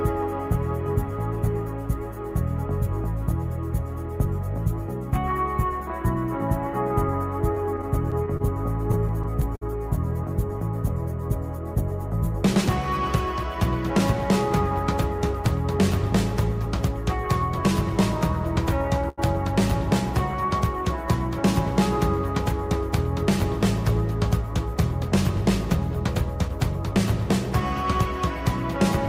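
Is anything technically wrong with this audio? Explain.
Yes. From 7.55 to 8.42 s and again from 8.92 to 9.63 s there is repeated stalls (stutter): packets kept arriving late, so the jitter buffer ran dry and the receiver held the last sound each time. That gives six brief freezes (84 ms in all, longest 28 ms), then five more (96 ms, longest 58 ms). Nothing drops out, but the sound drags and judders.

At 19.09 to 19.20 s there is a short stall from a late packet: one packet missed its slot and the receiver stretched the preceding sound by about 86 ms until it arrived. The sound is held too long before carrying on, with nothing lost.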